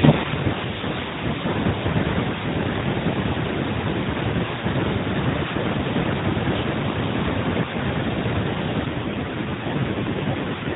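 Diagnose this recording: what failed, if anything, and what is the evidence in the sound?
The failure is an AMR rate drop, at the codec and network stage. From 8.86 s to the end of the clip, the speech turns rougher and more buzzy and synthetic. There's no gap and the band doesn't narrow; it's the same narrowband AMR sound as before, just coarser. That fits the network pushing the codec down from 12.2 to roughly 5.9 kbps to spend bits on error protection, leaving fewer pulses to model each frame.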